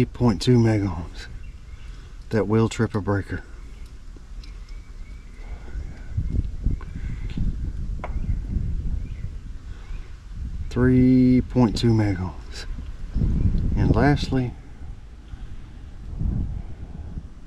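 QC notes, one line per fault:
No faults found in this clip.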